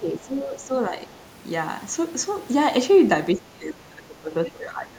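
Right from the start, up to about 0.72 s, the talker's level sags by roughly 10 dB. That's speech suppressed in double talk: the echo canceller likely heard the far end arriving at the same moment and, unable to tell the local voice from its own loudspeaker echo, pulled the whole microphone signal down rather than risk letting echo through.

Then, between 1.12 and 1.23 s, there's a brief scrap of the other side's voice leaking through. It's very faint, something like 35 dB under the talker, just a short blip. Most likely the canceller didn't quite strip the loudspeaker sound out of the mic feed there.

From 3.35 s to the end, the double-talk suppression returns and bites harder. The talker drops by around 20 dB at its deepest, and the squashing runs for about a second and a half. The near-end voice sounds pushed back, again likely because both ends were talking over each other.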